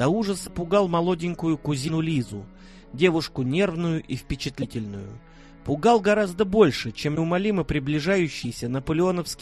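A likely broken MP3 bit reservoir: after frames went missing, the next frame read borrowed data from the wrong bytes. The sound jumps ahead with a brief, roughly 30 ms corrupted burst, about one 26 ms frame, at 0.46, 1.87, 4.61, 7.15 and 8.43 s.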